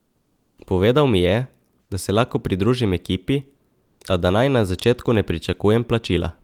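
From 0 to 0.57 s, before the speech begins, there is comfort noise in place of the background. The real room sound is missing. A steady, featureless hiss fills the gap instead, about 8 dB quieter than the background that follows. The background already sits about 47 dB below the loudest speech. The likely cause is discontinuous transmission, as in Opus DTX. The sender went silent during the pause, and the receiver synthesised noise to cover it.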